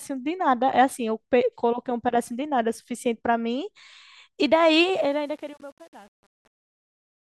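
From 4.81 s the speech fade-out shows truncation distortion. The stage drops low bits without dither, fitting about 8 bits. From 5.08 s it turns gritty.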